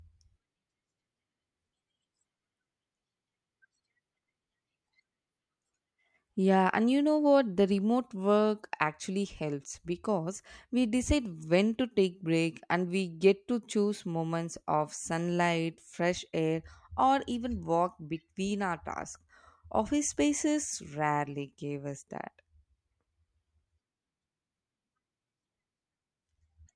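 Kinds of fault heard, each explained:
No technical faults can be heard in this speech recording. There is nothing to list under any kind of fault.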